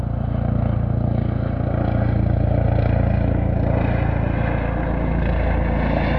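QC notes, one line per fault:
Nothing stood out on listening to this sound.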